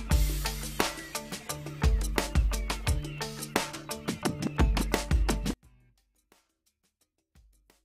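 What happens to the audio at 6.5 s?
From 5.53 s to the end at 7.85 s the audio collapses about 36 dB to a faint residue, likely one channel inverted cancelling shared content in mono; the waveform shrinks to near-flat and the spectrogram goes nearly empty.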